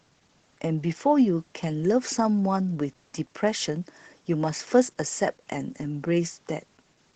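Speech, carrying Opus voice compression from start to finish: the SILK linear-prediction coder runs alone in wideband, so nothing above 8 kHz survives, and coarse excitation coding makes the voice plainly muffled, hoarse and slightly robotic, which fits a low bitrate near 12 kbps.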